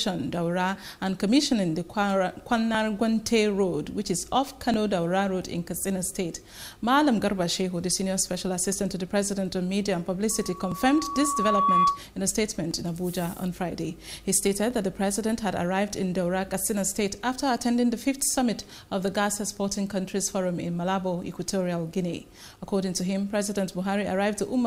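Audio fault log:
2.75, 4.74, 8.72, 10.72, 12.71, 14.71 s: overlap between stream segments. Brief slices of sound are dropped, so the waveform jumps, spaced to fit 2-second segments.
10.30–12.04 s: loudspeaker feedback squeal. A 1.1 kHz tone swells over about a second and a half, peaking a few dB above the sound, as the loop gain exceeds one.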